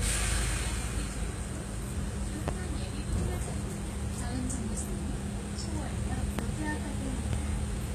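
From start to finish the sound carries plainly audible codec damage, most likely HE-AAC compression at a low rate, in line with something around 20 kbps. The treble is rebuilt by copying lower bands upward rather than coded directly, so the top end sounds synthetic, with a gritty, metallic edge where fine detail should be, and nothing at all above about 14.9 kHz.

On top of that come three loud pops, each a single sharp hit of under 30 ms: at 2.48 to 2.51 s, about 15 dB above the surrounding audio; at 6.39 to 6.41 s, the strongest at about 20 dB; and at 7.33 to 7.36 s, about 15 dB again. Each is likely a sudden voltage step or spike, from a plug, switch, static or driver glitch, dropped into the signal, while the sound keeps going underneath.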